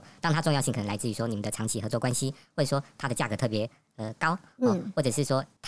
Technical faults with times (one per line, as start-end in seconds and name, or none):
0.00-5.67 wrong sample rate